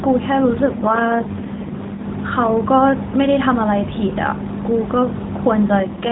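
Speech over a narrowband mobile link, with nothing above 4 kHz. An AMR rate drop occurs from 0.66 to 2.07 s and from 5.80 s to the end. The voice turns rougher and buzzier, which fits a fall from about 12.2 to 4.75 kbps. The band and continuity stay intact.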